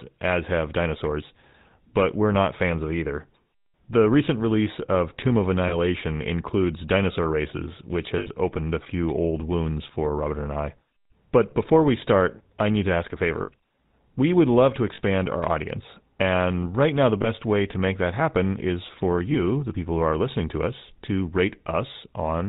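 The whole recording carries the plainly audible buzz of the GSM full-rate codec at 13 kbps. The voice is modelled by a vocal-tract filter fed with a coarse pulse excitation, which gives it a gravelly roughness. A spectrogram shows an empty band above 4 kHz and grainy, regular harmonics beneath.

Lost GSM frames occur at 5.68 s (just before "includes dinosaur races which"), 8.18 s, 13.42 s (after "need to ask a"), 14.94 s, 17.22 s (between "right now the" and "way to make that") and 19.32 s. Each gap is filled by repeating the settings of the last good frame, so it is heard as a brief metallic ring. The gaps last 20 to 80 ms, longest at 8.18 s. On a spectrogram each one appears as a frozen, smeared patch, and on the waveform as a short repetition.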